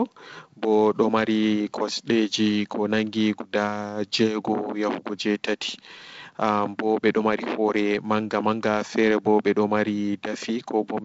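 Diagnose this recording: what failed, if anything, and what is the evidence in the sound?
Nothing failed: the speech comes through a wideband telephone path with sound reaching up to about 7.7 kHz, and there is no evidence in the sound of any fault.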